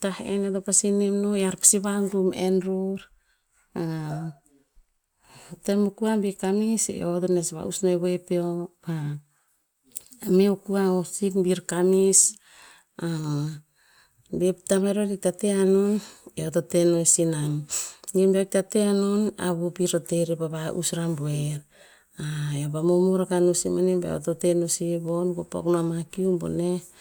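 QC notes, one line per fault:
No fault found.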